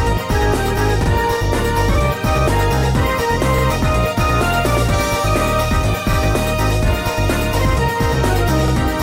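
The audio has a recurring stutter caused by overlapping chunks. It occurs at 1.04, 3.58, 6.13 and 8.68 seconds. At each point a slice of about 48 ms plays twice, heard as a brief click or hiccup. The audio was handled in chunks of 2.5 seconds, and each new chunk begins slightly before the previous one finished. The overlapping sound is repeated at every join, so the fault returns at a steady interval.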